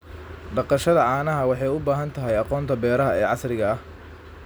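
Nothing technical stands out in this short bit of speech; there's simply no fault to point to anywhere in it.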